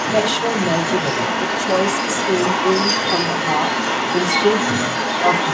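From the start of the clip to its end, about 5.5 s, a second voice runs underneath the speech at roughly the same level as the talker. This is the other side's voice leaking through: the far end was played on a loudspeaker and picked up again by the microphone, most likely because the echo canceller left a large residue. It shares the same band limit at 8 kHz as the main speech.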